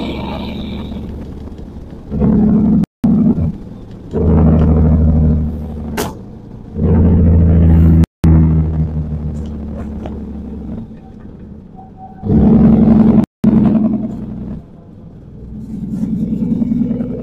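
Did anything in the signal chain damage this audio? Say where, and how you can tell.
Yes, there's a gap between chunks problem, most likely in the chunked delivery or playback stage. The sound drops out cleanly for 200 ms at 2.84 to 3.04 s, 8.04 to 8.24 s and 13.24 to 13.44 s. The holes land every 5.2 s, which fits 5-second chunks with 200 ms of silence slipped in at each join. Nothing gets cut; the sound just pauses and resumes.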